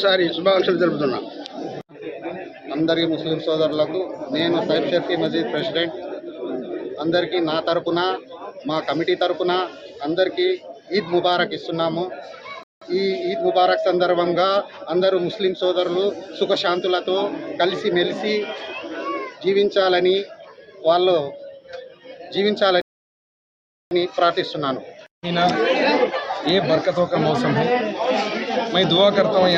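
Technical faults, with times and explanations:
12.63 to 12.82 s and 22.81 to 23.91 s, rebuffering stall: the player twice exhausted its downloaded audio and paused until more data arrived. The sound drops to silence for 0.18 s, then about 1.1 s, and resumes exactly where it stopped, adding time but losing nothing.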